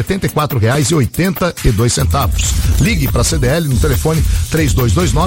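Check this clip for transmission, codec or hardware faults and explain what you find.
Two loud pops appear, at 0.75 to 0.78 s and 1.66 to 1.70 s. A sudden voltage step, likely from a connector, switch or static, entered the chain and was shaped by the following circuits. Each is a single sharp pop, roughly 10 dB above the sound, which continues underneath.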